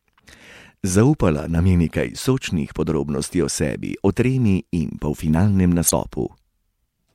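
Damaged data in a compressed stream breaks into this speech clip from 5.87 to 5.91 s, a glitch lasting about 46 ms that sounds like a short chirp or blip over the voice. Part of the encoded data at that point was corrupted, so the decoder could not read those frames properly, lost its place in the stream, and had to find the next valid frame header before normal playback could resume.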